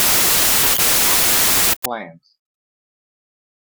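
From 0 to 1.86 s, a wrong sample width: the sound points to packed 24-bit data read as 32-bit integers. Most values straddle mismatched bytes, so loud noise swamps the speech, which sits buried underneath, running 1.33 times too fast and pitched correspondingly higher.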